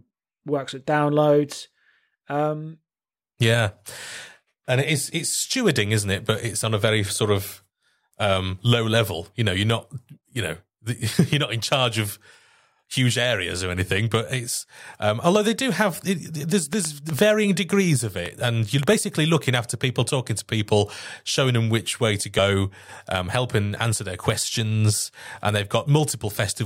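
From 16.73 to 18.94 s, after "do have it there's", a train of clicks sits over the speech until "looking after people talking". About seven similar pops arrive at an uneven pace, near 2.7 per second, roughly 10 dB above the speech. Nearby electrical interference is the likely source.

At 22.35 to 22.39 s, just after "them which way to", compressed frames are skipped. Some coded audio never reached the output, so the speech jumps ahead by around 30 ms.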